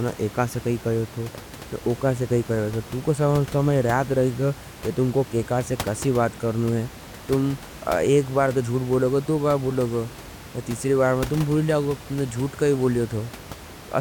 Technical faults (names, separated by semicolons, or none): none